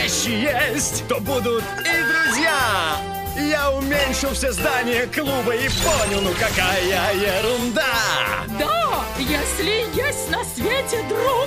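Loudspeaker feedback squeal from 1.53 to 2.36 s: a pure 1.6 kHz tone swells over roughly 0.7 s to sit about 5 dB above the sound. The microphone was hearing its own loudspeaker, and at that frequency the loop gain passed one, so the tone kept feeding itself.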